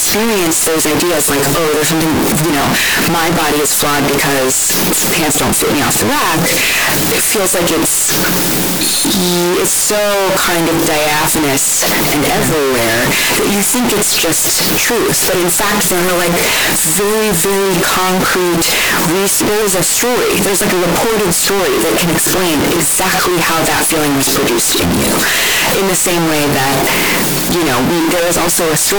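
The whole way through, the speech slams into a harsh, nearly square wall at an almost fixed, high level, background noise as loud as the talking, though pitch still tracks. That's likely float read as integer: 32-bit float samples interpreted as 32-bit integers.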